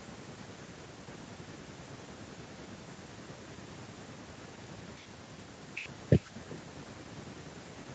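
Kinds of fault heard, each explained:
Echo with no canceller, throughout: the far end plays the call through a loudspeaker and its microphone picks it up again, with nothing removing that pickup, so every phrase of speech returns around 0.4 s later as a thin copy about 19 dB quieter.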